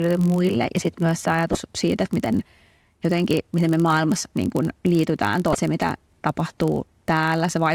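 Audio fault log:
Throughout: filter restarted on every block. There's a low buzz riding under the speech at about 46.9 Hz, and it gets stronger when the voice is louder and backs off in the quieter bits. That's a filter dropping its memory at each block boundary and starting again from silence, so every block opens with a small transient. The tick repeats at the block rate, which fits a 1024-sample block.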